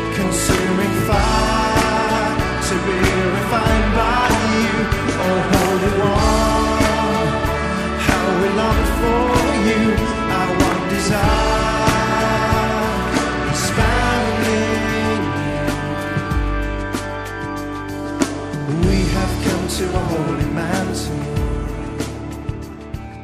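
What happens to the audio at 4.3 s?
Nothing goes wrong at 4.3 s; the audio there plays through intact, with no dropout, click, distortion or other fault.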